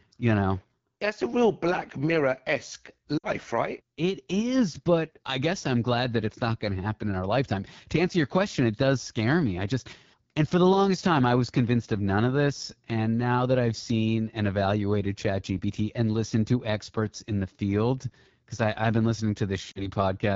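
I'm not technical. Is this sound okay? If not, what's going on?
No. The call was carried by the AMR wideband (HD Voice) codec at one of its lowest quality settings, squeezing the speech very hard to save data. Throughout the clip, that makes the speech sound rough and raspy rather than clean.

There are also lost AMR speech frames, where bits of speech were damaged in radio transmission and the phone had to fill in with a guess based on what came just before. You hear the sound drop to near silence, and the voice then comes back weak or rough for a moment, around 3.18 to 3.26 seconds and 19.72 to 19.88 seconds.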